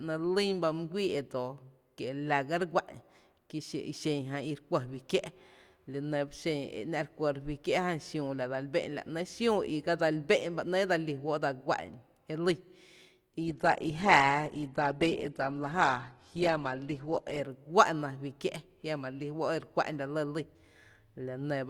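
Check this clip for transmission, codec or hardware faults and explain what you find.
One fault is present: an adaptive stream at a lower bitrate. From 13.41 to 17.41 s, the speech suddenly loses its treble. Nothing sounds above 12.4 kHz, and codec artefacts rise. The connection slowed, so the player switched to a cheaper version, which fits Opus dropping from 64 to 12 kbit/s. The switches are abrupt, with no gap.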